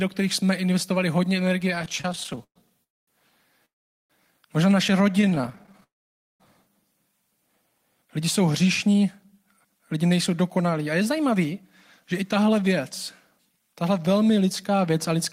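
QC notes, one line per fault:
1.75–2.58 s and 5.21–5.84 s, repeated stalls (stutter): packets arrived late or slower than playback, so the jitter buffer kept running dry, 20 times in the first stretch and 16 in the second. Each gap was bridged by continuing the previous sound, 320 ms and 172 ms in total, about 39% and 28% of each span. Nothing is lost, but the sound drags and catches. The longest gap is 117 ms in the first run, and only 16 ms in the second.
2.84–3.09 s, 3.65–4.12 s and 5.84–6.42 s, call audio freeze: delayed packets likely emptied the jitter buffer, and the receiver extended the last sound into a brief fading buzz before going quiet. The three holds last 239 ms, 443 ms and 562 ms, with roughly 220 ms, 420 ms and 520 ms of near-silence. Playback resumes where it stopped, so nothing is missing, but each freeze inserts a pause that pushes the rest later.
7.84–15.16 s, jitter buffer speed-up: with too much audio queued after the earlier hold-ups, the receiver trimmed short pitch-period slices over and over to shrink the delay. 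Roughly half a second is removed, and playback runs at about 107% of normal speed with pitch unchanged. The sound is slightly hurried from here to near the end.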